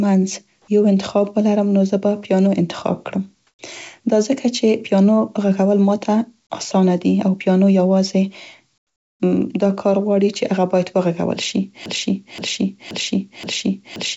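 At 3.47 to 3.59 s and again at 8.78 to 9.20 s, the faint background, sitting about 52 dB below the loudest passages, gives way to comfort noise in place of the background: a smooth, featureless hiss with none of the original texture. The first patch is brief and about 1 dB louder than its surroundings. The second is about 18 dB quieter, a noticeable dip. The likely cause is discontinuous transmission, where the sender goes silent during pauses and the receiver synthesizes generic noise until audio resumes.

From 11.86 s to the end, a 0.53 s fragment plays back to back four times, a broken-record loop that stutters in the same rhythm on every pass. Whatever should have been heard there is gone. This likely comes from a stalled player or stream re-sending the last buffer it held. The call-path band limit, with nothing above 8 kHz, fits G.722 at 64 kbps.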